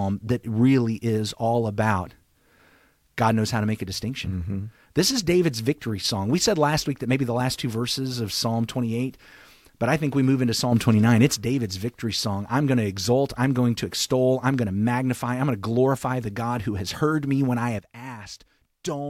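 A gain setting likely switched from one sample to the next with no ramp, causing a sudden gain jump in this speech. After "think we move into", sound and background noise step up together by about 6 dB from 10.72 to 11.37 s. After "heard me when I", both drop by about 11 dB from 17.79 s to the end.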